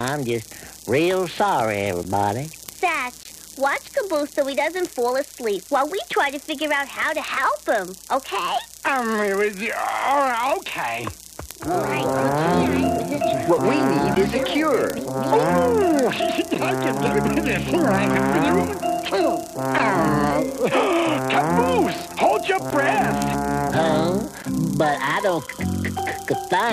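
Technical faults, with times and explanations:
0.31–26.43 s, word clock ticks: sharp single-sample ticks about every 0.3 s, from unlocked clocks drifting about 70 ppm apart; their steady spacing sets them apart from random clicks.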